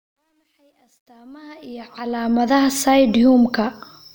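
From 0.0 to 2.49 s the speech fades in with truncation distortion. The fade stage drops low bits without dither, which fits about an 11-bit word length. Quiet levels become coarse steps. The worst stretch, 0.0 to 1.31 s, sounds gritty.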